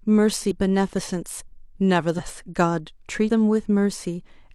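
At 0.47, 2.14 and 3.25 s the speech jumps forward as compressed frames are skipped. Runs of whole 46.4 ms frames never reach the output, so roughly 400, 300 and 200 ms of speech vanish. Unlike a dropout, there is no silent gap: the sound simply leaps ahead.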